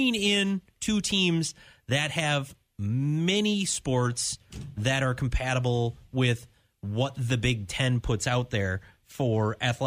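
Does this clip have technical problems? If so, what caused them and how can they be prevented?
No technical faults are audible.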